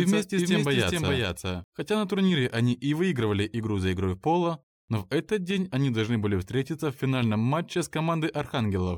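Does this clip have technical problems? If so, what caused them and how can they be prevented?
Yes. From the start to 1.64 s, every sound repeats about 400 ms later at roughly equal level, then stops abruptly: a doubled audio track, likely from a second, slower capture path. Prevent it by routing only one input to the recording.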